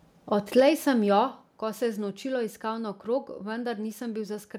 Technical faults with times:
0.57-0.69 microphone overload
0.60 microphone volume stepped down
1.59 microphone volume stepped down

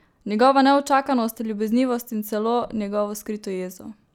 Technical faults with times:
none

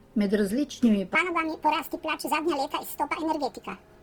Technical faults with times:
0.00-4.02 Opus compression
1.15-4.02 section at the wrong speed
1.97 repeated buffer

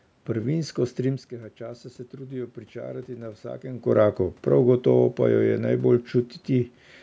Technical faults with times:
0.56-3.92 automatic gain rising

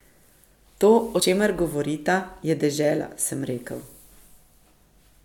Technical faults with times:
1.21 compressed frames skipped
2.42 compressed frames skipped

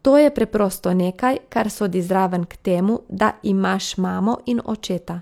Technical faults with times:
none

